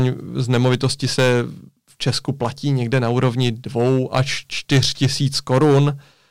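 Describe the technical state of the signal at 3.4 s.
At 3.4 s the speech is affected by hard clipping, which runs through the whole clip rather than starting or stopping near this point. The signal is driven about 6 dB past what the stage can pass, so the highest peaks are sheared flat. Only around 2 percent of samples go over, so the damage sits on the loudest moments. Those squared-off tops generate high harmonics, heard as a brittle crackle riding on peaks.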